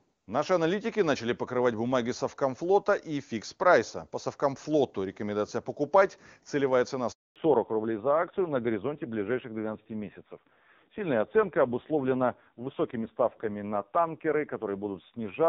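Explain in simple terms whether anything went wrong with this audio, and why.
At 7.12 s the speech cuts out for about a quarter of a second, until 7.36 s. This is a handover gap: the phone switched networks and nothing got through. From 7.36 s on, the speech sounds duller and rougher, with everything above 4 kHz gone. This is a fallback to narrowband, where the call dropped from clear HD Voice to an older, lower-quality phone codec.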